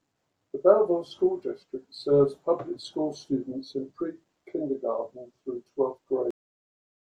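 At 6.31 s, right after "through twelfth", the speech stops dead in the middle of a sound and drops straight to digital silence, with no decay or room tail, and stays silent to the end. This is a cut-off end: the final stretch of audio was never written out or played, so the recording ends abruptly partway through a sound rather than reaching a natural stop.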